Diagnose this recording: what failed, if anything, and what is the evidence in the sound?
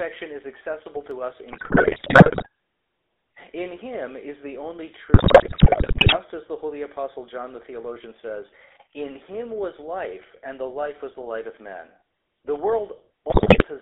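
GSM full-rate codec, throughout: the codec stage. The speech is confined to roughly 300 Hz to 3.6 kHz and carries plainly audible buzzy, gravelly roughness. This is the signature of the 13 kbps GSM full-rate coder, which models the vocal tract as a filter and excites it with a regular pulse train that keeps only every third excitation sample. The thinned excitation is what produces the rasp, and the narrow band is why nothing reaches above 4 kHz.

Dropped samples at 1.11 s, right after "is accessible": a single sharp click, seen as a thin vertical line across the spectrum. The waveform jumps straight from one value to a later one, a gap of only a few samples, about a tenth of a millisecond. The loss is far too short to remove any sound. A hiccup in the driver or buffer stage is the likely cause, with a handful of samples skipped during a transfer.

GSM bit errors at 1.52 to 2.47 s, 5.14 to 6.17 s (between "him is the only" and "as the holy apostle") and 13.3 to 13.65 s: the network stage, specifically a weak radio link. 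In these stretches the speech breaks into squawks, pops and gargling, frame after frame, for as long as each bad patch lasts. Corrupted filter, pitch or gain parameters reached the decoder intact, and the decoder faithfully rendered the garbage into the warped sound heard in these three bursts.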